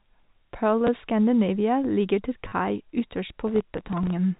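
It's a speech clip over a telephone-style link, band-limited to nothing above 4 kHz as G.711 A-law coding gives. There's packet loss with the last packet repeated at 0.87 s, a single tick from a 10 ms gap filled by replaying the previous chunk. A longer run hits from 2.48 to 2.52 s, right after "ligger til". That's 40 ms of repeats, which fits four 10 ms packets. The run gives a brief robotic stutter buzzing at about 100 Hz. Then from 3.47 to 4.10 s there's processor overload crackle. The system was missing deadlines on very short buffers, around a millisecond or two each, and holding old audio each time, roughly thirty misses over that stretch. The result is a gritty tearing over the sound until the load eases.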